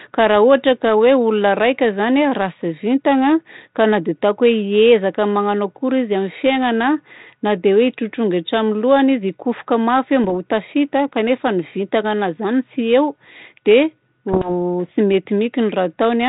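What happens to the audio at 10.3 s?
Bit errors on an ADPCM link hit from 10.24 to 10.31 s, just before "ho tafita kanefa ny". Each flipped bit knocks the decoder's step size and predictor off track, so the damage rings on briefly as pops and a rough burst with momentary level jumps over the 32 kbit/s G.726 audio.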